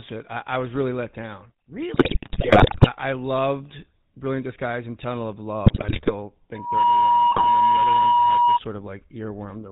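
Throughout, the speech has the buzzy, gravelly roughness of the GSM full-rate codec. Nothing passes above 4 kHz, which fits the 13 kbps full-rate coder.

From 1.94 to 2.88 s, and again from 5.66 to 6.11 s and 7.31 to 7.49 s, GSM bit errors corrupt decoded frames. The voice breaks into squawks, pops and gargling.

From 6.54 to 8.59 s, a loudspeaker feedback squeal at 961 Hz builds up within about a third of a second. It holds at about 10 dB above the speech.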